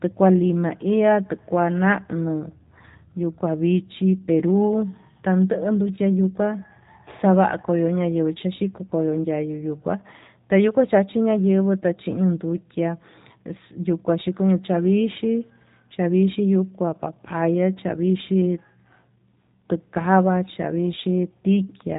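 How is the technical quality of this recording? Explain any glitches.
The recording is narrowband and audibly coded throughout. G.729 codec damage runs the whole clip: nothing passes above 3.8 kHz, and speech rebuilt from filter, pitch and sparse pulses sounds rough and synthetic, unlike a clean low-pass, which fits an 8 kbit/s G.729A stream.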